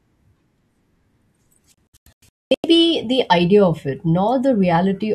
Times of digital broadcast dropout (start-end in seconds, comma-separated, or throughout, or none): 1.89-2.64